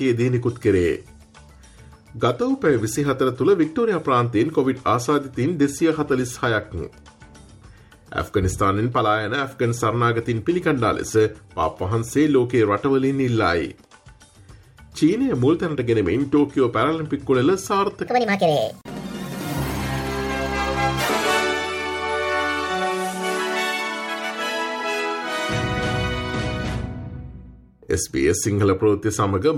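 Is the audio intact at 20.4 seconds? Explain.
No. A likely clock mismatch plays 18.07 to 21.09 s at 1.62 times speed, a section at the wrong speed that sounds hurried and about seven semitones high.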